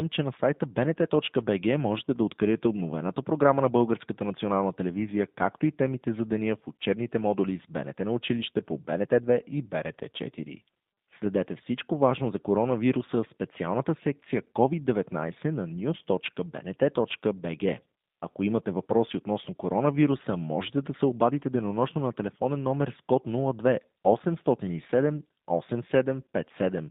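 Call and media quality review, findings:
Speech narrow and slightly rough, with a buzzy synthetic edge, throughout. Band limited to roughly 150 Hz–3.7 kHz. G.729 codec: speech resynthesised from a vocal-tract filter, pitch predictor and sparse pulses per 10 ms frame, consistent with 8 kbit/s G.729A.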